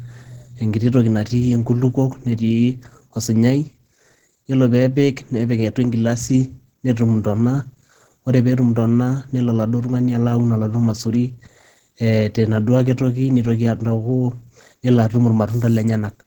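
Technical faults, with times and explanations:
Throughout, Opus compression: the speech sounds hoarse and grainy, with a rough, noisy texture and audible damage. The likely cause is Opus at a low rate of about 16 kbps, in its hybrid mode, where a speech-style coder carries the lower band and a transform coder fills the top. That top region is rebuilt from folded energy and noise rather than kept detail, and so it sounds coarse. The band still reaches fullband, up to about 20.2 kHz.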